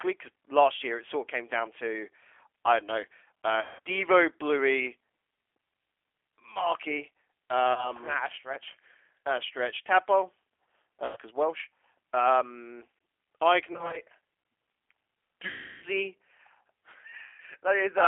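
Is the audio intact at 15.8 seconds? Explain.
No. From 15.48 to 15.84 s, VoIP packet loss concealed by the speech codec replaces speech with a decoder extrapolation that is stretched into a fading buzzy tone or coloured noise, showing as smeared energy and a shrinking waveform envelope. Throughout, the G.729 codec's 8 kbit/s model-based coding adds audible roughness, with the spectrogram empty above about 3.4 kHz.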